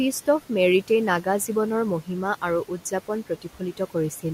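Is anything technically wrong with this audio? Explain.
Yes. Two related faults come from noise suppression.

Noise suppressor artifacts run through the whole clip. The suppressor pulls down the bands it judges to be steady noise by about 12 dB, frame by frame, so the room noise, about 18 dB below the speech, dips between phrases and swells underneath them.

Speech cut by the noise suppressor occurs between 3.29 and 3.95 s. The suppressor misreads some quiet speech energy as noise and attenuates it by up to about 10 dB. Only brief portions totalling roughly 150 ms are affected, and those soft sounds come across swallowed and faint.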